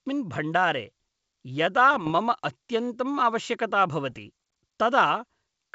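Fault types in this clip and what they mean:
Bit errors on an ADPCM link: corrupted bits in the adaptive coded stream throw the decoder's step size and prediction off track, so each error keeps ringing briefly. In this speech they come as pops and rough, gritty bursts with sudden level jumps from 1.94 to 2.11 s and from 4.10 to 4.19 s, pointing to an error rate of a fraction of a percent. Unlike packet loss, the sound never drops to silence or repeats; it turns harsh and uneven.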